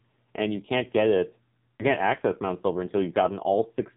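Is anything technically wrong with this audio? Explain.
Yes. AMR narrowband mobile codec compression runs through the whole clip. The speech passes through a vocal-tract model sampled at 8 kHz, so nothing above 4 kHz survives. The heavy buzzy, synthetic quality points to a low mode around 5.9 kbps, with only a few excitation pulses per subframe.

A lost AMR speech frame occurs between 1.77 and 1.86 s, after "you can't get it" and before "can't access". It sounds like a single 20 ms frame failed its checksum, so the decoder reused the previous pitch and vocal-tract settings at reduced gain, producing a brief dip or warble.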